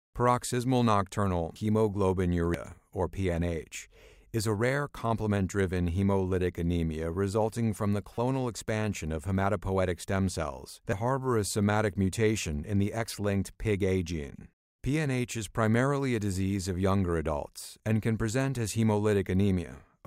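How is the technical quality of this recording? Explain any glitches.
Three brief glitches mar the speech, all from damaged data in a compressed stream: at 2.54 s, 8.15 to 8.18 s, and 14.36 to 14.39 s. Corrupted bytes make the decoder misread frames and lose sync while it hunts for the next valid header, producing short chirps or blips.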